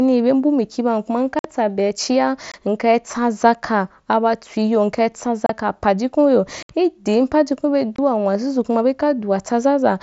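Short, hard-edged holes of near silence break the speech at 1.39 s (about 52 ms, after "mbu mikia bam kuma"), 2.52 s (about 23 ms), 5.46 s (30 ms), 6.63 s (about 68 ms) and 7.96 s (about 23 ms, before "n wazuzu kuma"). This is unconcealed Bluetooth headset packet loss: voice packets on the wideband mSBC link were dropped and nothing filled the gaps.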